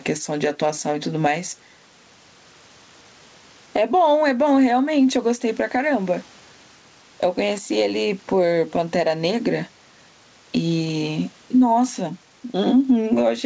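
Speech runs with gain pumping throughout, with a swing of around 10 dB, likely from input gain set far too high and a fast limiter clamping every peak. On a waveform the envelope looks flattened, loud and quiet passages sitting at similar heights, while a spectrogram shows the faint noise floor within a band that stops at 8 kHz.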